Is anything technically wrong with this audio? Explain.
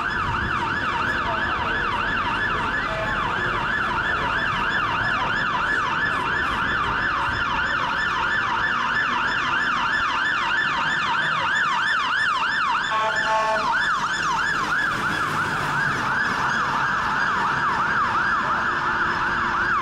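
No, nothing technically wrong.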